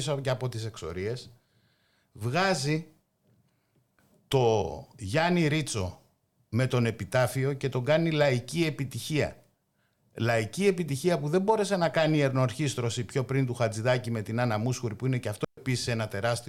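At 15.44 s, right after "που είναι και αυτό", the speech drops into a clean hole of near silence for about 130 ms, with no noise burst on either side. This is a digital wireless dropout: the receiver lost too much data and muted briefly.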